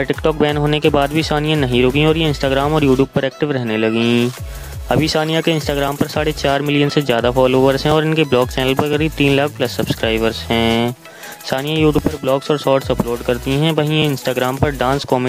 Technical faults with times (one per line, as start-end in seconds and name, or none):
5.88-15.04 periodic USB or driver dropouts